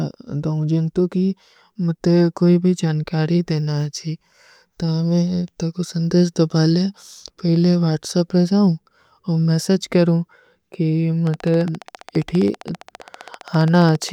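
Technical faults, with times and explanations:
11.27–14.10 s, train of clicks: a pulse source, likely interference from nearby equipment or a faulty connection or power supply, injects about 15 same-shaped clicks per second at an even pace, roughly forty in all. They are heard as steady ticking over the speech and through its pauses, peaking about 5 dB above it.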